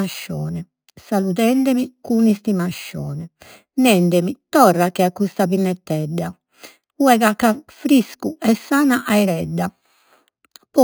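Throughout the speech, imaging from sample-and-hold upsampling adds a bright, metallic fizz. Each sample was simply repeated, with no smoothing. The lowest mirror copy sits between about 5.5 and 11 kHz, about 20 dB below the speech, which fits an original rate near 11 kHz.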